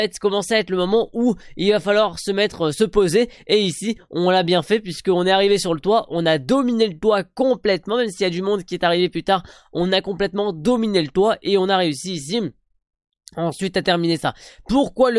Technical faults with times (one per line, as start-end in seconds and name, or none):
none